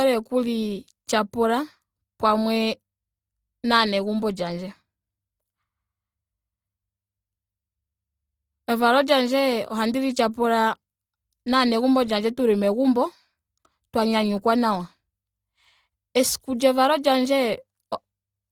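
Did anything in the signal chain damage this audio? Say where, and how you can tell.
Yes, at the codec: the speech sounds grainy throughout, likely from Opus compression near 24 kbps. A spectrogram shows noise-filled bands up to 20.2 kHz, without holes.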